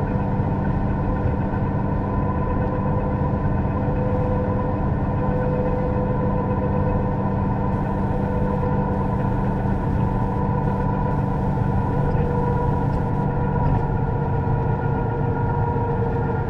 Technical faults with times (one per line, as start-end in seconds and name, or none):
7.72-13.25 computer activity noise